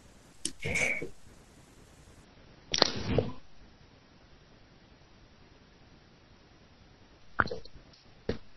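From 2.24 s to the end, the speech suddenly loses everything above 5.9 kHz and turns dull and swirly, with no gap. This is an adaptive stream at a lower bitrate: a slowed connection forced a switch, which fits a drop from 128 to about 24 kbit/s MP3.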